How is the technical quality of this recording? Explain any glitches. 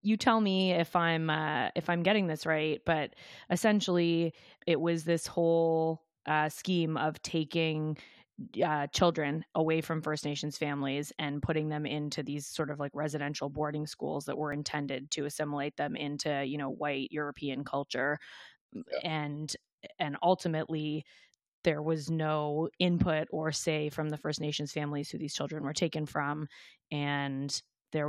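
One glitch is present in this speech recording. At 14.52 s there is an overlap between stream segments: a short piece of audio is cut where two 2-second segments meet, leaving a brief click or skip.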